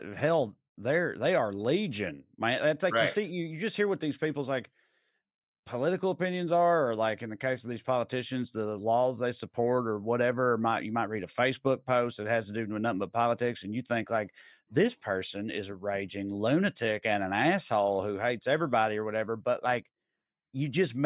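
A speech recording with no technical fault anywhere in it. No moment needs a time or a cause.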